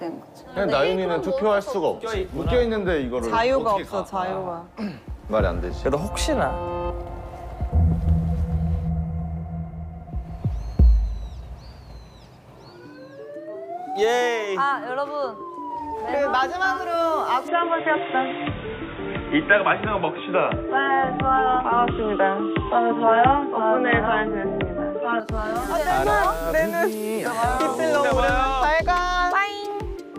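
The recording input likely switched to a poorer device at 17.48 s, staying there until 25.2 s. With nothing above 3.8 kHz, the sound turns abruptly dull and boxy, with no gap at the switch, a modest level shift and a faint new noise floor underneath.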